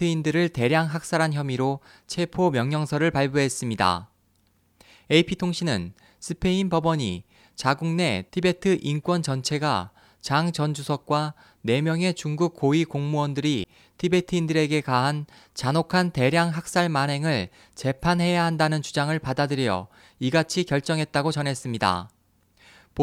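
At 13.62 to 13.65 s the speech briefly breaks and skips ahead, which fits roughly one MP3 frame. This is likely a broken MP3 bit reservoir: after frames were lost, the decoder took its borrowed data from the wrong frame.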